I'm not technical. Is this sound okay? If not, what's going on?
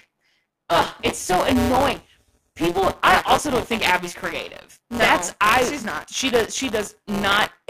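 No, there's buffer tearing all the way through: a small slice of each 256-sample chunk replays audio from just earlier, giving the speech a robotic 172 Hz buzz.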